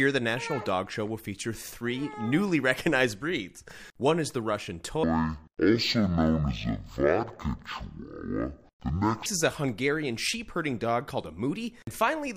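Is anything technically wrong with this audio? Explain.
Yes. From 5.04 s to 9.26 s the audio shows a stereo-read-as-mono fault. The left and right samples, which alternate in the stream, are taken one after another as a single channel, so each second of material takes two seconds to play. The section therefore runs at half speed and drops a full octave, 12 semitones, sounding slow and heavy. A fainter mirrored copy of the content also sits in the upper half of the spectrum.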